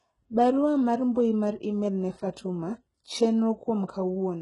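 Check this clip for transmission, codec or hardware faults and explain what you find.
One codec fault runs through the whole recording. HE-AAC compression, throughout: the speech has nothing above 11 kHz, and its treble is likely rebuilt by spectral band replication, copying lower bands upward under a coarse envelope at a rate that sounds close to 12 kbps. S sounds turn gritty and metallic, with heavy codec damage.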